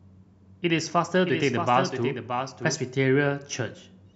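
From 1.24 to 2.76 s, a second copy of the speech runs about 0.7 s behind the first, a few dB quieter, dry and full-band, cutting in and out abruptly. This doubled audio track is likely a slower second capture path mixed alongside the original.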